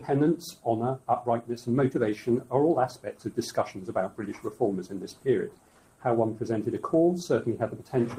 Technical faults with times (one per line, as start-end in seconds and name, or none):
0.00-8.19 noise suppressor applied to music or sounds
2.94-3.33 sound cut by the noise suppressor
3.74-6.04 sound cut by the noise suppressor